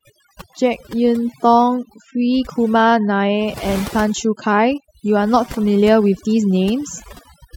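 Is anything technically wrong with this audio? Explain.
Yes. Overdone noise removal runs through the whole speech clip. The reduction is set too strong, so frequency bands near the estimated noise floor are pulled down or cut entirely. Quiet parts of the voice vanish with them. The background drops and breaks up into twinkling specks.

There is also overlap between stream segments, at 0.53 s and again at 2.50 s. Segment timestamps overlap, and the player trims sound that was never actually doubled. About 5 ms disappears each time, so the waveform jumps. Each one is heard as a small click or skip.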